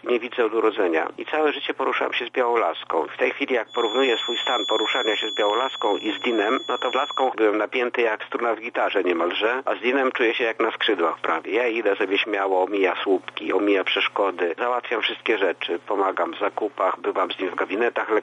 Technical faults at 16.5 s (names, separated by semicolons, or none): none